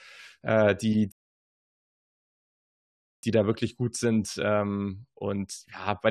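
At 1.12 s, right after "äh die", the speech drops into silence. This is a rebuffering stall. The player used up its downloaded audio and waited for more. Playback resumes at 3.23 s with "da wirklich gut sind", exactly where it stopped. Nothing is missing, but about 2.1 s of dead air is added.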